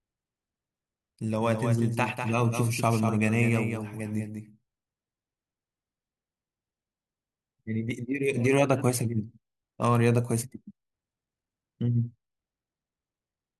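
From 1.41 s to 7.91 s the speech has a flat, exact repeat trailing it by around 200 ms, roughly 5 dB quieter, with no room tail, switching on and off abruptly. This doubled audio track likely comes from a second, slower capture path mixed in.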